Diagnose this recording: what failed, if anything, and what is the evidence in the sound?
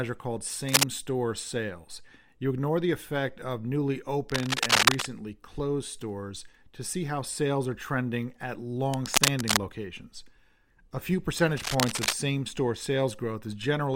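Uneven bursts of scratching and rustling land at 0.68–0.83 s (before "store sales"), 4.29–5.07 s, 8.89–9.58 s and 11.56–12.13 s, first well above the speech, last about level with it. This is cable scratch noise, likely from a worn analogue cable or connector whose contact resistance jumps as it moves.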